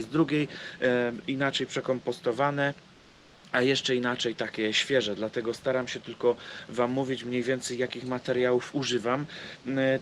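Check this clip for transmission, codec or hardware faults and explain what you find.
One fault is present: comfort noise in place of the background, from 2.95 to 3.43 s. For about 0.48 s, the real background is swapped for a steady, featureless noise, about 2 dB quieter. The likely cause is Opus discontinuous transmission pausing the sender, with the receiver synthesising noise.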